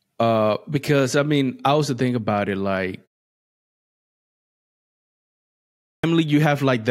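At 5.82 s, after a pause of about 2.8 s, a clipped start after a pause swallows roughly 215 ms as the sleeping output wakes, so speech begins abruptly mid-sound.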